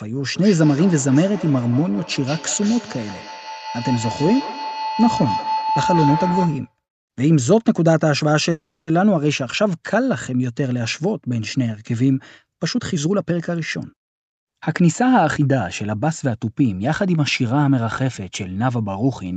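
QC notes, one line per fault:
0.35–6.76 s, feedback howl: A tone near 1 kHz builds up and peaks at about 5 dB below the speech level. It pulses roughly every 200 ms, which matches the round-trip delay of the loop. Two endpoints in one room were sharing the call, so each pass from loudspeaker to microphone added gain. The repeats grew instead of dying away and narrowed to the frequency the loop favoured, and the howl continued until the loop was broken.
8.51–8.93 s, call audio freeze: The last sound is stretched into a fading fill for about 360 ms, with roughly 270 ms of that being silence. Speech then resumes exactly where it stopped, so nothing is lost, but the remaining audio arrives about 360 ms later than before. This is likely due to packets that were held up in transit, leaving the jitter buffer empty so the receiver had to improvise until data arrived.
12.58–16.31 s, jitter buffer speed-up: The speech runs at about 109% of normal speed, but the pitch stays the same, so it sounds hurried rather than raised. 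The jitter buffer was holding more audio than its target, as happens after delayed packets arrive in a burst. To reduce the delay, it cut many short segments one or a few pitch periods long, removing around 0.4 s in total over the span.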